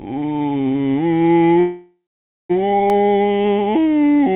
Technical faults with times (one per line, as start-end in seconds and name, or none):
0.00-4.35 mains hum
1.60-2.52 call audio freeze
2.90 block of digital silence